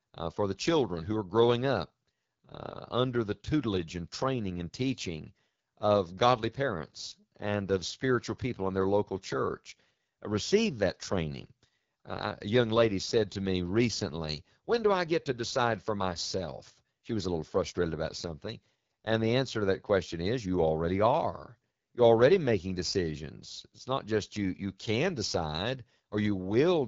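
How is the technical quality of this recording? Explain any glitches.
The recording has one fault, present throughout: the speech has passed through the AMR wideband (HD Voice) codec at a low rate, and the damage is plainly audible. From start to finish, the codec rebuilds the voice from a pulse-excited vocal tract model rather than the original waveform, so at this rate the speech comes out rough and raspy. The top band is synthetic shaped noise, and nothing reaches above 7.5 kHz. The coarseness points to roughly 8.85 kbit/s, one of the codec's two lowest modes.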